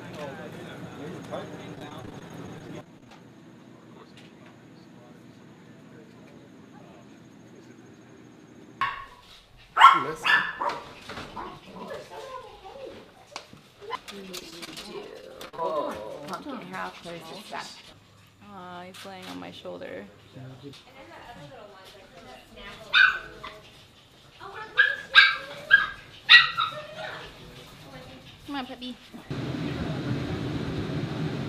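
From 1.75 to 3.11 s there's repeated packet loss giving a robotic sound: 16 small holes, none longer than 18 ms, each patched by stretching the last bit of audio. That's about 12% of the stretch concealed, so it comes across choppy.

Then short concealed packet loss at 14.39–14.42 s, 14.50–14.53 s and 14.65–14.68 s, each a 10–30 ms gap filled by continuing the previous sound, heard as quick smears or wobbles.

At 15.21–15.59 s the repeated packet loss returns: four gaps, the longest 42 ms, with 23% of the span filled in, so it sounds choppy with pieces missing.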